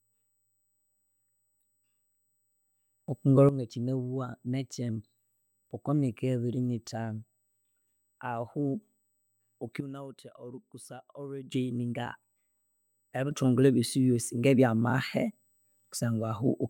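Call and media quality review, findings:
USB whine, throughout: fixed-pitch tone at 8 kHz, strongest at its 16 kHz multiple, roughly 45 dB under the speech. Bus current drawn in 125-microsecond microframes leaking through power or ground into the analogue input path.

Sudden gain jump, 3.08 to 3.49 s (up about 10 dB), 9.80 to 11.52 s (down about 12 dB), 13.31 s to end (up about 6 dB): speech and noise floor step together. Likely digital gain applied sample-to-sample without a ramp.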